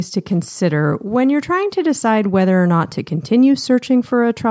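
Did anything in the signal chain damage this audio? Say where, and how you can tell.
No, nothing in the signal chain damaged this audio.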